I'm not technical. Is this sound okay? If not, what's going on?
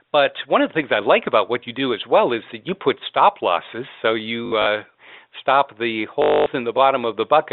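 No. At 4.46 to 4.66 s, and again at 6.22 to 6.46 s just after "stop the", the sound briefly turns into a robotic, buzzy stutter. This is packet loss with the last packet repeated: bits of the call went missing, so the phone kept replaying the last short slice until fresh sound arrived. The first spot is scattered hiccups; the second is one quarter-second buzz. A dropout would go silent instead. The muffled telephone quality is normal here.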